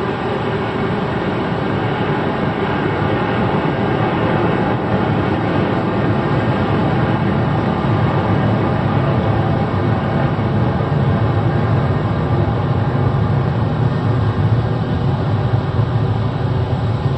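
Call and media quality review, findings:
No audible faults found.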